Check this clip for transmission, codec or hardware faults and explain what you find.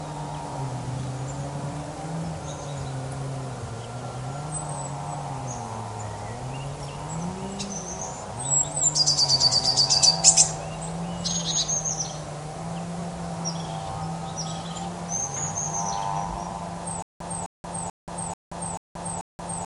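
One fault is present, in the final seconds. From 17.02 s to the end, stutter with silent gaps: a 258 ms burst repeats six times every 437 ms, separated by 179 ms of digital silence, likely from a stalled stream replaying its last fragment on each retry. The waveform shows identical blocks alternating with flat silence; a spectrogram shows repeating vertical slabs split by empty columns. The audio that should have played there is lost.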